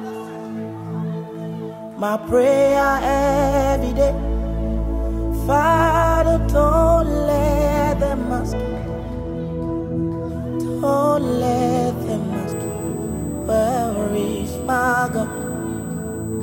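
From 12.52 s onward, USB whine: bus microframes leak through power as a fixed 8 kHz tone about 20 dB down, a horizontal spectrogram line.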